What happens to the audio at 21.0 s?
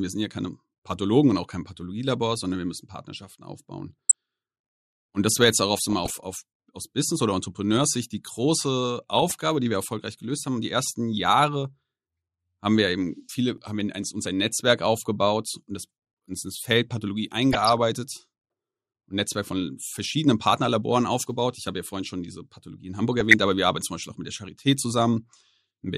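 At 21.02 s there is a brief burst of DAB burbling: a watery disturbance that cuts across the speech for an instant. Bit errors, at a low rate of roughly 0.15 percent, have slipped past error correction into the MP2 data. Wrong samples put short blips of noise into individual sub-bands, and the spread of the disturbance fits several damaged frames. Unlike a click or a dropout, the sound keeps playing but briefly blips in isolated frequency bands.

Underneath, and throughout the recording, the speech has the dull, granular quality of MP2 compression, likely at around 80 kbps. Layer II divides the spectrum into 32 sub-bands, and at this rate it starves the upper ones of bits, so the treble fades in and out and the remaining bands sound coarse and gritty. This damage is steady and continuous, whereas the burbling is a momentary, erratic eruption.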